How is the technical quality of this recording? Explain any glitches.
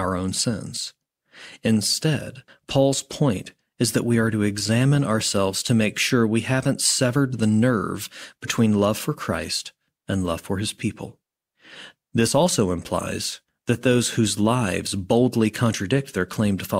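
No glitches can be heard anywhere in the recording. There are no dropouts, interruptions or other technical faults to explain.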